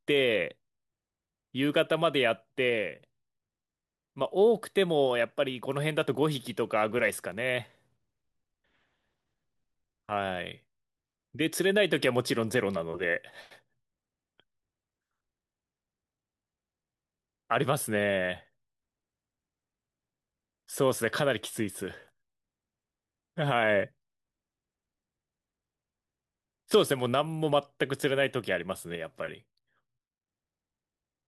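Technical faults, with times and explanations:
28.96–30.28 s, sudden gain jump: the level steps down by about 5 dB within a single sample and steps back up just as abruptly, likely from a gain setting applied without a ramp. Unlike a fade, there is no slope, and the background noise drops together with the speech.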